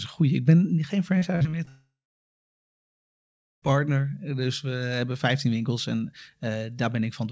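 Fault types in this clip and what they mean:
repeated packet loss (robotic sound): From 1.18 to 1.69 s the speech turns choppy, with five short holes, the longest 47 ms, each patched by stretching the sound just before it. About 140 ms, some 28% of that stretch, is filled in.
long network dropout: From 1.69 to 3.64 s the speech gives way to a brief fading buzz, then about 1.72 s of near silence, and resumes with about 1.94 s simply gone. The likely cause is packets failing to arrive for that whole span.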